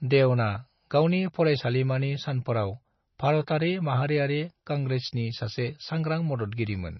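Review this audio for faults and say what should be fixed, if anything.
Throughout the speech the sound is watery and swirly, with chirpy, smeared sibilants and nothing above 5.9 kHz. This is heavy MP3 compression, likely from a bitrate near 24 kbps, which forces the encoder to cut the treble and let weak frequency lines flicker between frames. To prevent it, encode at a higher bitrate or keep an uncompressed master.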